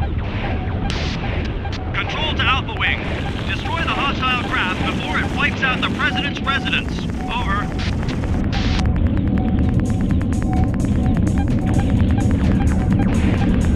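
From 2.77 s to 13.66 s a train of clicks runs through the audio, a steady ticking at about 9.65 per second, roughly a hundred in all, evenly spaced and much alike. They poke a few decibels above the sound and carry on through quiet gaps. The likely cause is interference pulses or a faulty connection or power supply. A waveform shows a comb of sharp spikes; a spectrogram shows thin vertical lines spanning all frequencies at regular intervals.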